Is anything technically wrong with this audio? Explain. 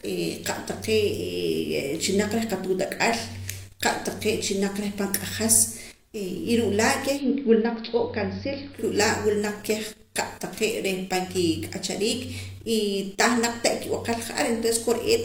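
Yes. From 7.09 to 8.85 s, digital radio blends to analogue. The receiver loses the digital stream and cross-fades over about 123 ms to the AM broadcast. The level drops about 2 dB, and hiss sits roughly 30 dB below the speech.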